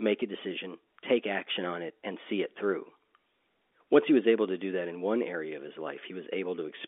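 No technical faults can be heard in this telephone speech.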